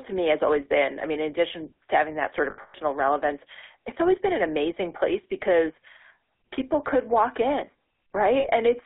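Throughout, the speech has a buzzy, gravelly roughness and a squeezed band of roughly 300 Hz to 3.6 kHz. This is the GSM full-rate codec, which models the vocal tract and drives it with coarse pulses; the sound fits its 13 kbps rate.

From 2.50 to 2.76 s, the sound hangs repeatedly in a rough, metallic ring, the longest stretch lasting around a tenth of a second. A shorter ring follows at 8.40 to 8.47 s. These are lost GSM frames: the decoder replays the last good frame's settings at falling level. About 200 ms is lost, scattered through the first span, and 40 ms in the second.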